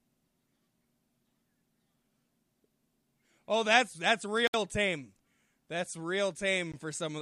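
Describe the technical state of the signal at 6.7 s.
At 6.72 s the speech drops out for about 17 ms, a Bluetooth stall. The sound falls to silence and then resumes, most likely because radio interference delayed packets long enough for the headphones' buffer to empty, so playback paused until the resent data arrived. On a waveform it shows as a brief flat line cutting straight across the speech envelope; on a spectrogram, a thin vertical gap where every frequency band goes dark at once.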